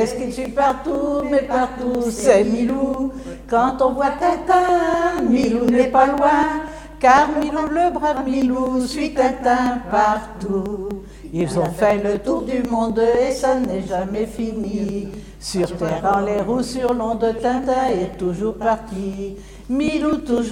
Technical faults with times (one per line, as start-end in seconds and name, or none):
0.21-20.38 periodic USB or driver dropouts